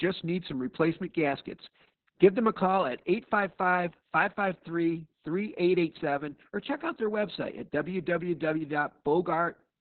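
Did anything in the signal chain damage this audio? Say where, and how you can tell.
Yes, at the codec stage, throughout the clip. This is heavy Opus voice compression: the speech is band-limited with nothing above 4.3 kHz, and it sounds muffled, hoarse and faintly robotic. This fits narrowband SILK at a very low bitrate near 6 kb/s, with coarsely coded excitation.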